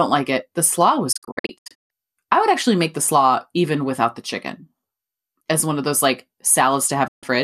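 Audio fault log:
1.12–1.91 s: digital broadcast dropout. The sound breaks into several short holes spread over about 0.77 s, losing roughly 0.46 s in total, with the longest gap 0.14 s. Each hole drops in and out through a quick 8 ms fade. The receiver muted whenever frames failed, which points to about 24 ms frames.
7.07–7.23 s: digital broadcast dropout. About 0.14 s of sound drops out, faded in 8 ms. Whatever was sent then is gone.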